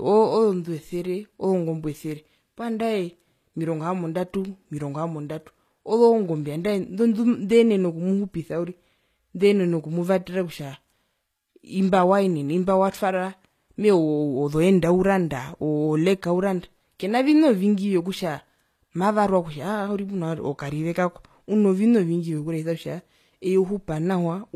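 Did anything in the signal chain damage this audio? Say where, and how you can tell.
Yes, at the codec stage, throughout the whole speech clip. The treble sounds bright but wrong: sibilants come out gritty and lispy, with a metallic sheen that never settles. That is the signature of spectral band replication, where the upper band is synthesised from copied lower bands under a coarse envelope, so its harmonics misalign with the real low end. The cause is likely HE-AAC compression, and the plainly audible damage fits a low bitrate around 24 kbps.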